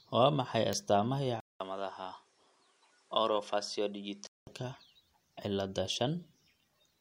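From 1.40 to 4.47 s the speech goes dull and cut off above 11.4 kHz after a 200 ms gap, likely the input switched to a poorer device.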